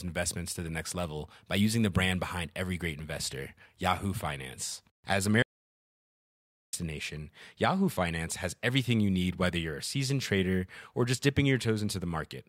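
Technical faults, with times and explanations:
5.42 to 6.73 s, audio dropout to silence: the speech cuts off abruptly and about 1.31 s of silence follows, with no room tone at all, before speech resumes mid-flow. The input was likely lost while recording continued writing silence.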